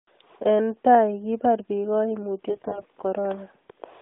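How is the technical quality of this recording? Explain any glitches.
The speech comes through narrowband AMR, limited to about 250 Hz–3.7 kHz, with one glitch. From 2.50 to 2.85 s, AMR bit errors turn the voice hoarse and gargly: at a high error rate, unprotected bits flip, scrambling pulse positions and fine gain and spectrum values. Unlike a dropout, pitch and loudness carry on.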